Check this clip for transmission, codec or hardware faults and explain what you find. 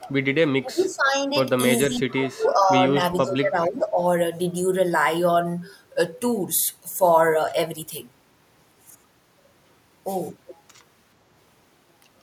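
Speech suppressed in double talk occurs from 0.0 to 1.37 s, 1.83 to 2.99 s and 3.21 to 4.01 s. The level sinks by roughly 25 dB, then about 15 dB in the last stretch. That is likely an echo canceller failing to separate this side's talk from the overlapping far-end echo and turning both down.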